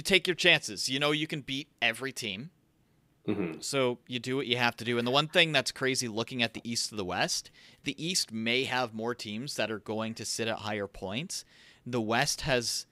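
No technical faults heard.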